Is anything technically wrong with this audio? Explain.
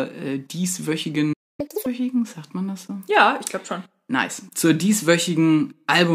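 Yes, the speech stops briefly and then races to catch up.

Playback stall, 1.33 to 1.60 s: the speech cuts to silence for about 258 ms in mid-flow. This likely came from the player running out of buffered data or its output thread being blocked, so nothing reached the output until it recovered.

Catch-up at higher speed, 1.60 to 1.86 s: when sound returns, the player resamples its backlog at double speed to recover the lost time, so the speech rushes and jumps up in pitch by roughly ten semitones before snapping back to normal.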